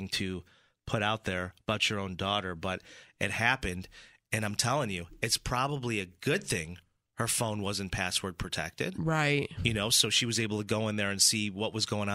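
No technical faults can be heard at any point in the recording.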